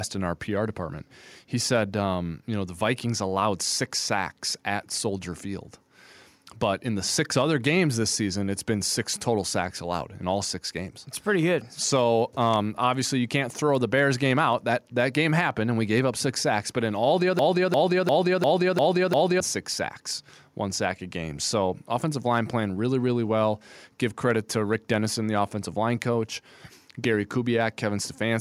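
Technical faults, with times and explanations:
17.39 to 19.40 s, broken-record loop: a 0.35 s fragment of the speech plays six times back to back, identical each pass, and the speech that belonged in those two seconds is lost. The player or stream likely stalled and kept resending the last fragment it held.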